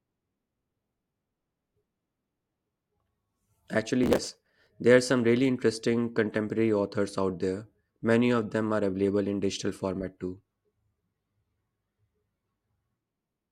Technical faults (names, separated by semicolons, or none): processor overload crackle